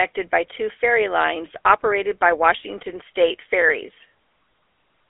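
From start to finish the speech has passed through the GSM full-rate codec. The coder models the vocal tract as a filter and excites it with a coarse train of regularly spaced pulses rather than the true waveform. That approximation is plainly audible as a buzzy, gravelly roughness on every stretch of speech. The sound sits in a narrow phone-line band of about 300 Hz to 3.4 kHz, muffled and thin, which fits a 13 kbps GSM link.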